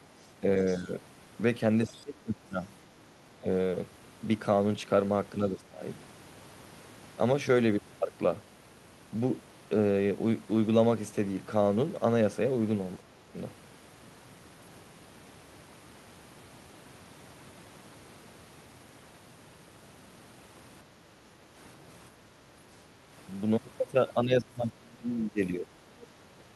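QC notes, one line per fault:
0.22–0.81 s, 1.85–2.01 s, 26.02–26.07 s: other side's voice leaking through. A faint second voice, quietest in the first and last, is likely residual loudspeaker echo the canceller missed.
0.41–0.9 s, 1.87–3.48 s, 5.49–5.82 s, 12.97–13.36 s, 24.25–25.72 s: speech suppressed in double talk. The talker's level dips sharply, deepest late on, likely from the canceller turning down both sides during overlap.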